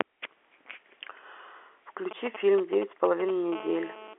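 From 2.11 s to 3.54 s, GSM signalling bursts break into the speech: a 2G handset close to the recording chain is exchanging brief control transmissions with the network, and the audio circuitry rectifies those radio pulses into the signal path. What emerges is a galloping dit-dit-dit of short 217 Hz buzzes, sitting roughly 10 dB under the speech.

At 3.55 s the handset moves into a continuous call transmission, and the pattern becomes a steady GSM phone buzz running until 4.14 s. The phone now transmits a burst 217 times a second. Once rectified, those pulses give a hard, raspy 217 Hz tone dense with harmonics at about 17 dB below the speech. It has no relation to what is being said.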